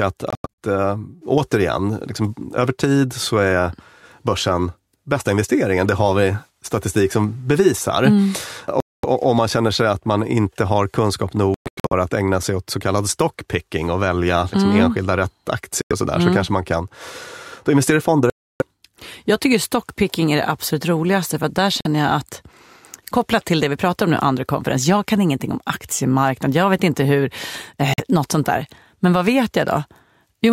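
Silent gaps cut into the speech at 0.30–0.47 s (several short holes), 8.80–9.05 s before "om man känner sig", 11.54–11.93 s between "man inte har kunskap" and "att ägna sig åt", 15.82–15.93 s before "sådär mm så kanske", 18.30–18.62 s, 21.81–21.87 s and 27.94–28.00 s. This is likely Bluetooth dropout: late packets are discarded and the speech jumps ahead, missing material, rather than pausing and resuming where it stopped.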